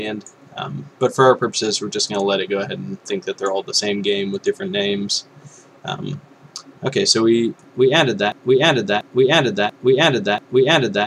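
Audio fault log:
8.32–11.07 s, broken-record loop: a 0.69 s fragment of sound repeats exactly, back to back, four times and runs to the end of the clip, so whatever should have followed is lost. This is likely a player, encoder or stream stalling and resending the last buffer it held. On a waveform the same envelope shape recurs at 0.69 s intervals; on a spectrogram an identical block of energy tiles repeatedly across that span.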